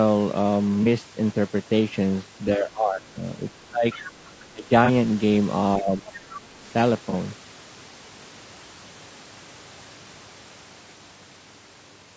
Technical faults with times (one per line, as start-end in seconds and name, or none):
0.00-12.17 low-delay AAC compression
0.83-0.87 AAC frame loss with concealment
2.56-3.16 speech suppressed in double talk
3.65-3.86 speech suppressed in double talk
3.91-4.12 other side's voice leaking through
4.53-4.70 speech suppressed in double talk
4.85-4.90 AAC frame loss with concealment
5.78-6.06 speech suppressed in double talk
7.10-7.14 AAC frame loss with concealment